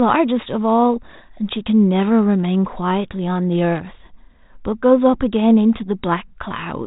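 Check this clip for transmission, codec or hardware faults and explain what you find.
Listening through the speech, nothing stood out, and its 32 kbit/s G.726 ADPCM telephone path gave nothing worth reporting.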